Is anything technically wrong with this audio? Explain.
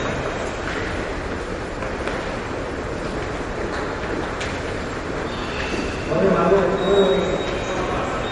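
Yes. MP3 compression artefacts run through the whole clip, and they are plainly audible. Nothing sounds above 10.6 kHz, so the treble stops at a hard ceiling. The likely cause is an MP3 encoder short of bits. The damage fits a low bitrate around 40 kbps. With too few bits, the encoder trims the top band and drops quieter frequency detail that comes and goes between frames. That leaves the sound dull at the top with a watery, swirling texture.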